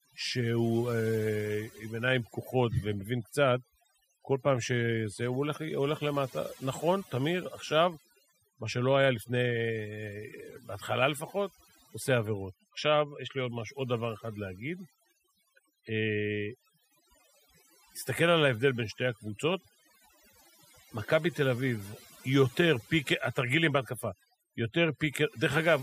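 Throughout, the speech sits over a near-silent, twinkling background: overdone noise removal, gating frequency bands near the noise estimate and stripping quiet voice detail.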